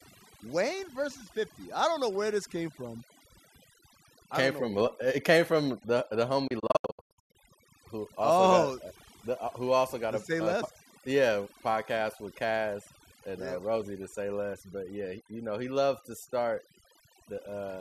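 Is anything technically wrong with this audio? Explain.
Yes, two faults are present.

Overdone noise removal runs throughout: an over-aggressive noise reducer gates bands near its noise estimate, leaving twinkling specks in the background.

A digital broadcast dropout occurs from 6.47 to 7.35 s. The receiver mutes failed frames, leaving short holes totalling about 528 ms, the longest 96 ms, each with an 8 ms fade.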